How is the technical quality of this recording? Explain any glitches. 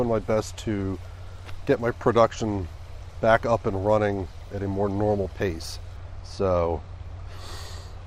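The technical quality drops near the end, where a single fault affects the recording. From 5.96 s to the end, de-emphasis is applied wrongly: a treble-cut filter meant to reverse pre-emphasis acts on sound that was never boosted, or that had already been de-emphasized once. The highs roll off smoothly, about 8 dB down at 10 kHz relative to 1 kHz, so the final stretch turns dull and muffled.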